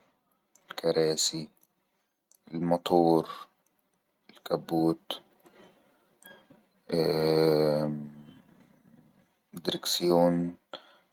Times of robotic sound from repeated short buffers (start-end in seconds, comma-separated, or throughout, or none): none